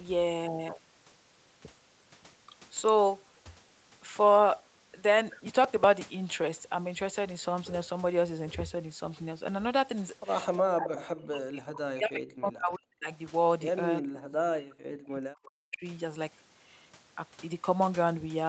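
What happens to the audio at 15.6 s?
The speech dips sharply between 14.13 and 15.85 s, dropping by around 40 dB at its deepest. This is likely speech suppressed in double talk: with both sides talking, the echo canceller mistook this talker for loudspeaker echo and turned it down.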